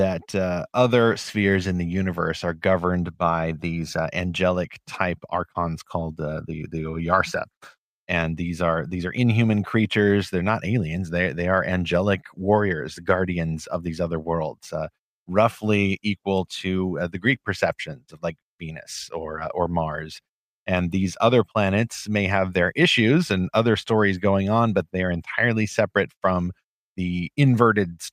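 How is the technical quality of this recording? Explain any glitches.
No technical faults can be heard anywhere in the recording, so there are no glitches to explain.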